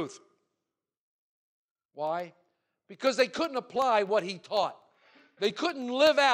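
Speech with periodic USB or driver dropouts from 0.07 to 6.2 s: every 0.125 s a sliver of well under a millisecond drops to silence, giving an 8 Hz train of ticks heard only under signal. The waveform shows tiny regular notches, the spectrogram evenly spaced thin vertical broadband lines.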